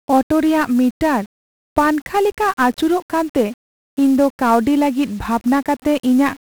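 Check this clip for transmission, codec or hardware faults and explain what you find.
One codec fault runs through the whole speech clip: 1-bit DFPWM compression. Each sample keeps a single bit that nudges an adaptive level up or down. The damage is heavy. Broadband quantisation noise makes everything fuzzy and crackly, with treble dulled or sunk in hiss. The sound fits a stream of about 48 kbps.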